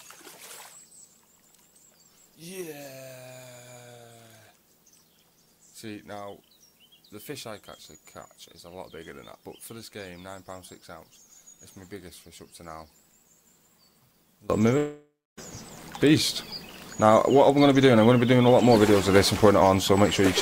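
From the start to 14.5 s, the mono sum is about 20 dB down, with the centred content largely gone and only a faint residue remaining. This points to one channel inverted. The likely cause is one stereo channel arriving with reversed polarity, so that everything common to left and right cancels when the two are summed, leaving only their difference.

At 14.77 s the sound breaks off, and the last moment is stretched into a fading tail. It decays to near silence for roughly a quarter of a second before normal audio resumes at 15.39 s, with about 0.6 s of material simply missing. This behaviour matches a long network dropout. The likely cause is that no packets arrived for that span, so the receiver concealed the gap by extending the last sound until it ran out.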